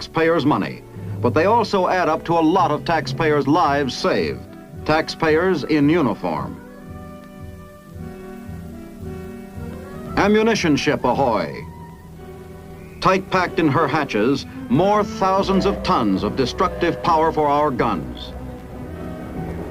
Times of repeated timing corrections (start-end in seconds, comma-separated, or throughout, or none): none